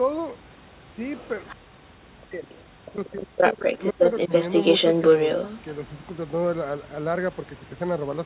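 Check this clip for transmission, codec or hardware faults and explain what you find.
The clip has two echo-control faults, both tied to a far-end voice on a loudspeaker.

Other side's voice leaking through: a second voice is audible at 0.93–1.56, 2.49–2.69 and 2.89–3.17 s, about 20–25 dB below the talker, then about 5 dB above the talker from 3.37 to 6.05 s. The likely cause is an echo canceller leaving loudspeaker pickup in the microphone. On a spectrogram, a second harmonic pattern overlaps the talker's.

Speech suppressed in double talk: the talker's level drops by up to about 40 dB between 1.56 and 2.53 s and between 2.79 and 4.05 s, with a brief dip of about 5 dB at 4.28–4.32 s. This is likely the canceller attenuating everything during overlap. The waveform shows gaps, and the spectrogram, already band-limited at 4 kHz, shows the speech energy dropping.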